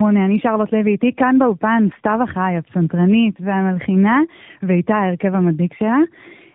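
From start to finish the speech carries tandem speech coding. It was decoded and re-encoded at link borders, each coder working on the previous one's degraded output. The sound points to two narrowband model-based passes with a plain telephone-grade link between, which fits AMR-NB on both ends. It sounds rougher and noisier than one pass would, muffled and warbly. A spectrogram shows nothing above 3.8 kHz, with smeared, unsteady harmonic bands below.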